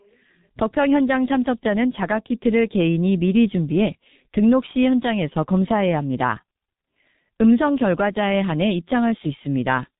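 From start to finish the speech runs through a G.723.1 codec, and it's heavily mangled: nothing above about 3.8 kHz survives, and the slow 30 ms frame updates smear consonants into a muffled, hoarse rasp, which fits a bitrate around 6.3 kbit/s.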